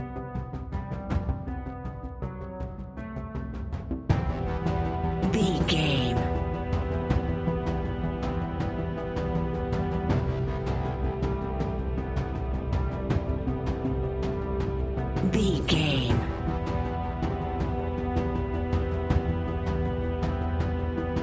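No technical faults can be heard anywhere in the audio.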